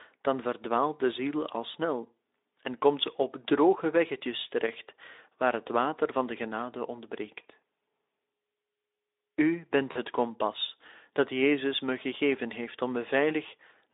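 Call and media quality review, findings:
VoIP packet loss concealed by the speech codec, 9.91 to 9.97 s, just before "kompas dat": about 40 ms missing, fitting two lost 20 ms frames. The Speex decoder extrapolates the last pitch and filter at falling gain, giving a brief buzzy or noisy smear with weak recovery over the narrowband 300 Hz to 3.7 kHz line.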